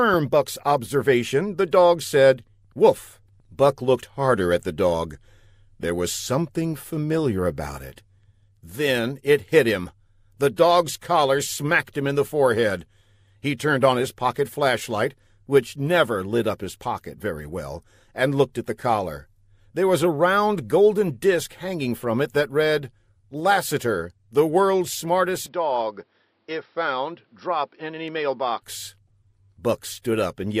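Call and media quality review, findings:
Speech, 25.46–28.62 s: abrupt dulling, no gap at switch; band capped at 5.6 kHz (spectrogram: hard ceiling), waveform drops about 5 dB, faint new noise floor well below signal. Likely input switched to a poorer device, narrower-band mic path.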